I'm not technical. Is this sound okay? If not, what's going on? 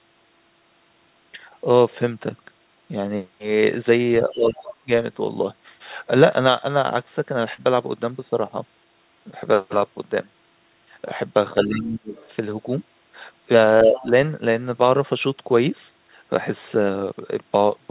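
No. The call's echo canceller was likely confused when both people spoke at once, so it turned this talker down along with the echo. The speech dips, weakens or briefly breaks up around 4.25 to 4.56 s, 4.83 to 4.89 s, 11.67 to 12.15 s and 13.84 to 14.07 s. That is speech suppressed in double talk.

The same echo canceller likely failed to remove all of the other person's voice, which was playing from this talker's loudspeaker, so some of it got back into the microphone. That is the other side's voice leaking through: a faint second voice at 4.29 to 4.75 s, 12.16 to 12.31 s and 13.91 to 14.05 s.

At 7.54 s, about 40 milliseconds of the call arrived too late to be used. The receiving end filled the gap by stretching the sound just before it. This short concealed packet loss is heard as a brief smear or wobble.

All of this passed through a phone-quality call connection, which carries nothing above 4 kHz, so the speech has a narrow, telephone-like sound.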